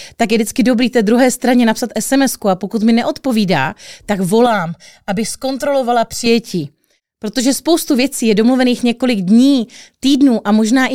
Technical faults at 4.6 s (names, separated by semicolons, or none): channel delay (comb filtering)